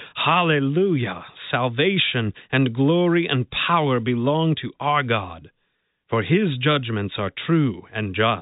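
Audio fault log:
Band-limited by G.711 telephone coding, the speech has nothing above 3.8 kHz and only a faint quantisation noise that tracks its level, with no faults audible.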